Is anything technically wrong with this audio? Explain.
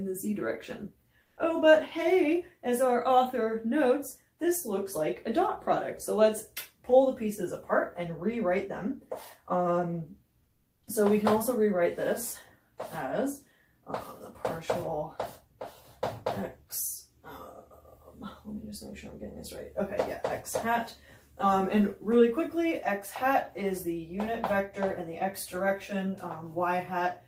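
Yes. Comfort noise in place of the background turns up at 1.23 to 1.35 s and 10.43 to 10.83 s. The real background turns into flat, featureless hiss, about 6 dB and then about 2 dB quieter. That's likely the sender's discontinuous transmission (Opus DTX) pausing and the receiver filling in synthetic noise.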